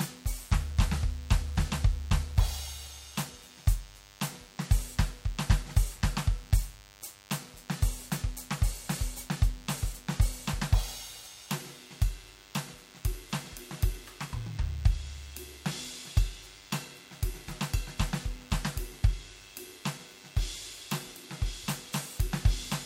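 A DECT cordless phone buzz runs beneath the music for the whole clip. A nearby handset's radio bursts every 10 ms are rectified into a thin 100 Hz buzz, well below the music. A spectrogram shows evenly spaced horizontal harmonic lines; the waveform shows small spikes every 10 ms.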